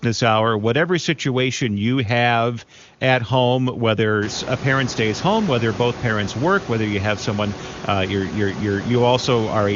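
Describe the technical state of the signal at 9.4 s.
At 9.4 s the signal is intact, with no technical fault to be heard at that moment.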